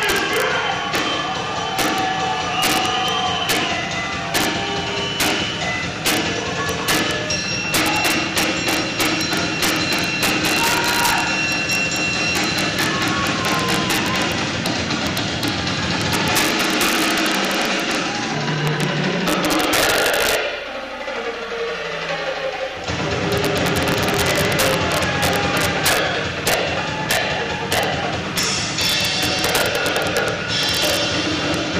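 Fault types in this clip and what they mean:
integer overflow: Gain pushed the signal about 6 dB past the integer limit, and samples beyond it wrapped to the opposite sign instead of being limited. Roughly a third of a percent of samples cross it, giving sharp cracks on peaks throughout the clip.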